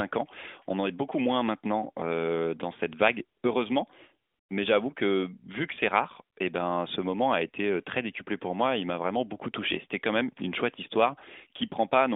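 No faults are audible in this speech, which sits in a mobile AMR-NB channel at about 12.2 kbps, limited to roughly 250 Hz to 3.6 kHz, with only the light synthetic edge that codec leaves at that rate.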